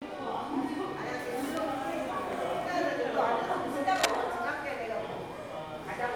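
Cable scratch noise from 3.96 to 4.16 s: a dense, uneven scratching burst about as loud as the sound itself, likely from a worn cable or connector being moved.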